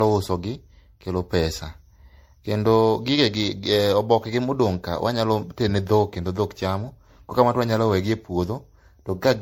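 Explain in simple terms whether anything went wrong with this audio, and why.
Something did go wrong: the speech has generation loss from start to finish. It sounds swirly, hollow and smeared, with the starts of sounds blurred, and nothing comes through above about 16.6 kHz. One round of heavy MP3 compression would sound dull, but not this watery. The extra swirl is the giveaway: the audio was likely squeezed and unpacked around seven times, each pass adding its own damage on top of the last.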